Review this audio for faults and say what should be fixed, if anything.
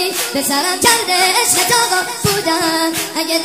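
Wrong sample rate throughout the clip: everything plays about 1.38 times too fast and roughly 5.5 semitones sharp, which fits 32 kHz material played at 44.1 kHz unconverted. On a spectrogram, every component sits proportionally higher and events are compressed in time. Read the file's true rate and resample to the playback rate rather than relabelling the samples.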